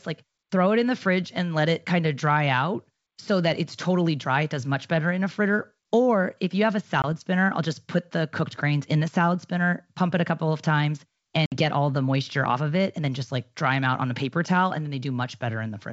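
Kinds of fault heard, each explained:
Packet loss on an ADPCM call: lost packets left hard-edged silent gaps of 20 and 60 ms, throwing the decoder's adaptive predictor briefly out of step with the sender's.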